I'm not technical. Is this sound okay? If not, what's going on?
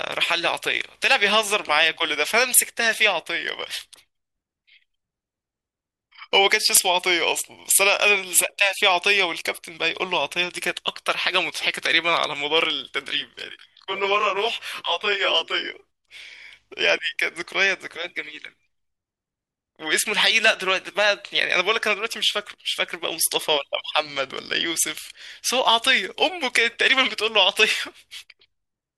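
No. From about 13.07 to 15.74 seconds the speech turns rough and slightly doubled. This is a channel delay (comb filtering): one side of the recording arrives roughly 20 milliseconds late, and when the two sides are combined, parts of the sound cancel each other, starting low around 30 Hz and repeating up the range. With a delay this long, the voice comes across as rough and slightly doubled rather than as a clear, separate echo.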